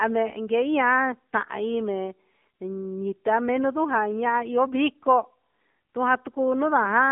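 From start to finish the speech carries AMR narrowband mobile codec damage: nothing passes above 3.5 kHz or below 200 Hz, and the vocal-tract model leaves a plainly buzzy, synthetic edge, which fits a low rate near 7.4 kbps. That coded texture, not just the narrow band, separates it from a simple telephone filter.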